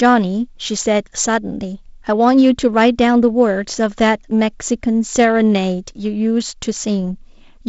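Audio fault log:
No faults are heard in this speech audio.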